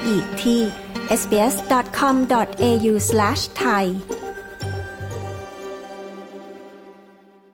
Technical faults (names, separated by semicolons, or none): none